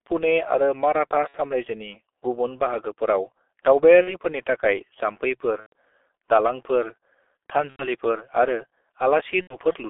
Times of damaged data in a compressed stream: none

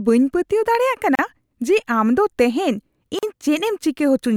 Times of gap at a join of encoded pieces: 1.15-1.19, 3.19-3.23

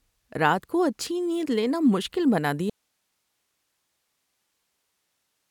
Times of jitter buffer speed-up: none

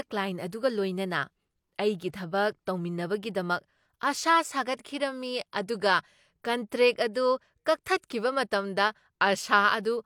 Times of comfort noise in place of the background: none

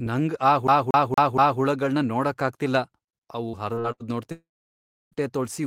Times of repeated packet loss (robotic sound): 3.49-4.03

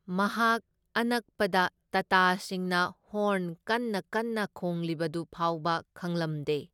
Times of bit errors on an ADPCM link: none

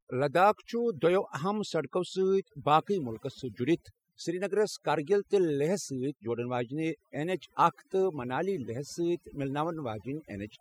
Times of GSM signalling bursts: none

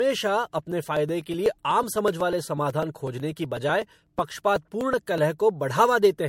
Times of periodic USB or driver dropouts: 0.59-5.18

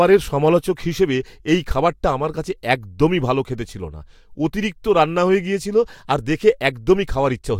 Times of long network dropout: none

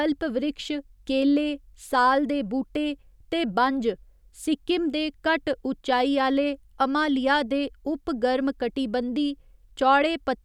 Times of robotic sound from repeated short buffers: none

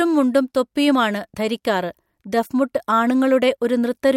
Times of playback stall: none

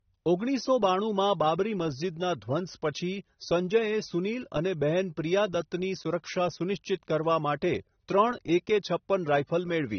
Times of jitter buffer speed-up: none

